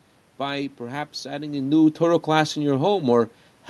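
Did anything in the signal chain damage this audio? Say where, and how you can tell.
Yes. Automatic gain falling in the call processing, from 1.53 s to 3.31 s, just after "by perhaps adding". The gain control judged the input too loud, or its background noise too strong, and eased it down by about 4 dB, so the speech and the room noise behind it sink together.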